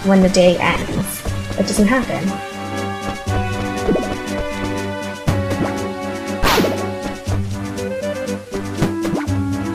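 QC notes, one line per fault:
0.72–1.01 s, lost LE Audio frames: a brief grainy flutter where about 135 ms of audio went missing in short bursts spread over roughly 285 ms, the longest gap only around 20 ms. That pattern fits losing a handful of 7.5 ms LC3 frames at a time. The decoder patched each hole by replaying the last spectrum with scrambled phase, so tonal parts smear into noise rather than dropping to silence.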